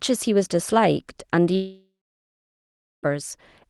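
At 1.55 s the speech smears into a fading buzz, then goes quiet for about 1.1 s and resumes at 3.06 s minus the lost stretch, likely a long network dropout.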